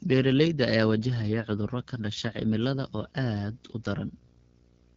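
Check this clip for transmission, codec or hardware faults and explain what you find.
Two faults are present: a low-rate wideband codec throughout, and display interference from 1.86 s to the end.

AMR wideband (HD Voice) codec, whole clip: speech is coded with a pulse-excited vocal tract model, and the top band is filled with shaped noise. The rough, raspy texture fits the 8.85 kbit/s mode, one of the two lowest. Nothing is present above 7.6 kHz.

Video or display buzz, from 1.86 s to the end: a screen or video cable is coupling into the audio path. It produces a 59.94 Hz buzz at the picture's field rate, with hash above it and a 15.7 kHz line-rate whine. It sits about 30 dB below the speech.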